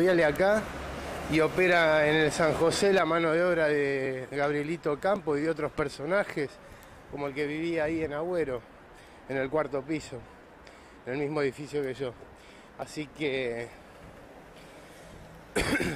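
At 4.06, 5.16, 7.12 and 12.82 s the audio jumps forward, skipping roughly 20 to 40 ms with no silent gap, which likely points to a dropped buffer (overrun). Unlike an underrun, nothing pauses; material is simply missing where the two sides butt together.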